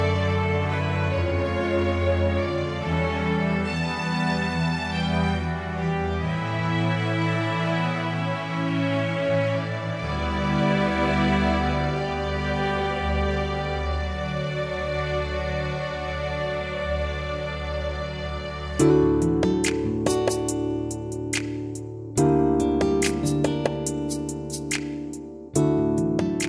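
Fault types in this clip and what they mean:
No fault types are present in this clip.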